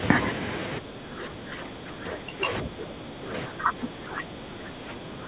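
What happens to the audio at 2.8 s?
The echo canceller, likely faced with both sides talking at once, turns the talker down along with the loudspeaker echo. At 2.8 s, this speech suppressed in double talk (0.8 s to the end) leaves the voice dipping, by around 10 dB at its deepest.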